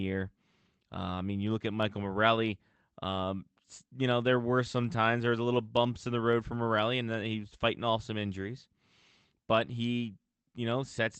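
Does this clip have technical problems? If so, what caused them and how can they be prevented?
No technical faults can be heard.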